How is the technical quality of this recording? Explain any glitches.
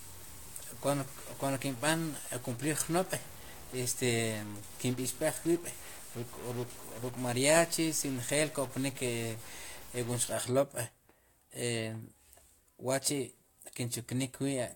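The recording has two technical faults, one running through most of the clip and one brief.

From 0.0 to 10.3 s there is distortion riding on the speech, and the pauses fill with hiss instead of falling silent. The likely cause is a stuck bit: one data bit held at a fixed value, shifting about half the samples by that bit's weight. Unlike clipping, it doesn't depend on loudness and persists through quiet gaps.

At 5.44 s a tiny fragment plays three times in a row with hard joins, heard as a quick click or buzz rather than an audible stutter. This is a repeated buffer: fresh audio arrived late, so the last block, which fits a buffer of about 5 ms, was played twice more, losing about 10 ms. A dropout would leave a gap instead of a repeat.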